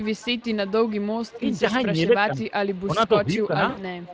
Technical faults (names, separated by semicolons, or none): echo leak; speech suppressed in double talk; VoIP packet loss concealed by the speech codec